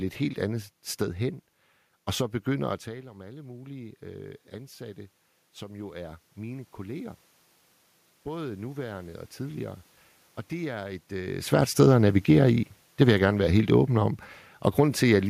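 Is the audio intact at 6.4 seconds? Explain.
Yes, the audio is intact at 6.4 seconds, with no system fault at that point.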